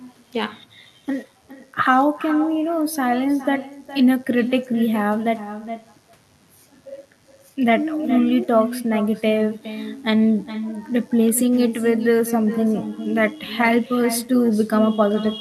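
From start to finish the speech is trailed by echo with no canceller: the far end is playing the call through a loudspeaker, its microphone captures it, and nothing strips it out, so the talker's own speech returns after the network round trip, around 400 ms later and about 11 dB down, sounding thinner. On a waveform each burst of speech has a fainter duplicate offset by that gap; a spectrogram shows ghosted, weaker copies of every syllable's harmonics shifted right.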